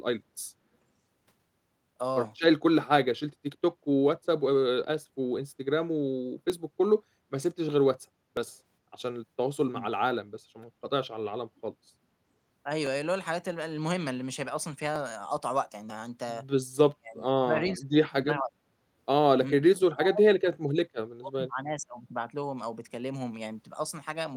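The stream likely lost a fraction of a millisecond of samples at 1.70, 6.50 and 8.37 s, so the waveform jumps and each of these dropped samples spots gives a single sharp click.

At 11.57 s an echo leak appears: a loudspeaker-side echo canceller likely let some of the signal through, so a very faint copy arrives 417 ms late for a brief scrap.

Further dropped-sample clicks follow at 12.87, 14.96 and 15.90 s.

From 16.93 to 18.62 s both sides talk at once, and the canceller likely treated the talker as echo. This speech suppressed in double talk makes the voice dip or cut out in pieces, at worst by around 40 dB. At 17.68 s, inside that stretch, the delayed echo returns briefly and more clearly, about 20 dB below the speech.

The same double-talk suppression comes back from 19.53 to 22.01 s, chopping the voice again for about two seconds in total.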